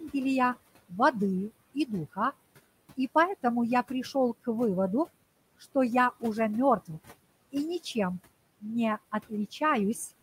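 Noise suppressor artifacts run throughout. The suppressor pulls the room noise down by about 20 dB between words, so it pumps back up under the speech.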